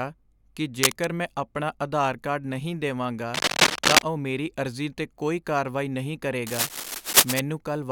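Cable scratch noise breaks into the speech three times: 0.81 to 1.05 s, before "ਮੈਂ ਆਪਣਾ ਆਧਾਰ ਕਾਰਡ", 3.33 to 4.04 s, before "ਉਹ ਮੇਰੀ ਅਰਜ਼ੀ 'ਤੇ", and 6.46 to 7.40 s, after "'ਤੇ ਕੋਈ ਕਾਰਵਾਈ ਨਹੀਂ". Each is a ragged scratching burst, somewhat louder than the speech. The likely cause is a worn cable or connector flexing and shifting its contact resistance.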